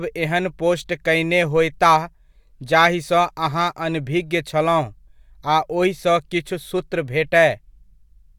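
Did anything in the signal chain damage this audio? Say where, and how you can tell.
No, nothing in the signal chain damaged this audio.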